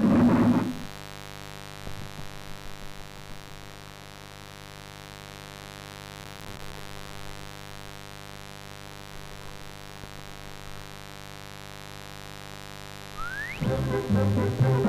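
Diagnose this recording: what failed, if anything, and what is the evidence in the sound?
A steady, raspy mains buzz runs through the whole recording, about 15 dB below the signal. The fault is in the analogue wiring. Switching spikes get in twice per 50 Hz cycle, so the harmonics of 50 Hz reach well into the kilohertz range.

Processor overload crackle appears from 6.2 to 6.73 s. It is a gritty burst riding on the sound, and then it stops. The failure is at the driver and buffer stage. Around twenty late buffers of about 10 ms were skipped. Each skip leaves a hard-edged gap.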